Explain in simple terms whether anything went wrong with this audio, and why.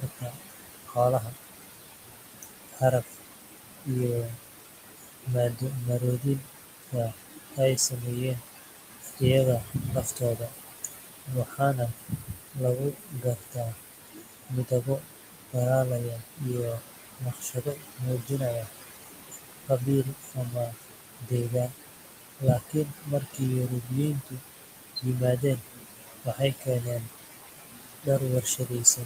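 Noise suppressor artifacts run through the whole clip. A noise suppressor tries to remove the background noise of the room by turning down, moment by moment, whatever it judges to be steady noise. Here it pushes that background down hard, so the room sound dips in the pauses and comes back up whenever someone talks.

Speech cut by the noise suppressor happens in seven stretches: 0.0 to 3.89 s, 4.24 to 9.22 s, 9.6 to 15.56 s, 15.98 to 22.06 s, 22.39 to 25.05 s, 25.38 to 27.25 s, and 27.69 s to the end. The suppressor mistakes parts of the speech for noise, and quiet consonants, word endings and softer sounds get turned down along with the background. In the longer stretches several seconds are affected, so parts of the speech sound swallowed or fade out.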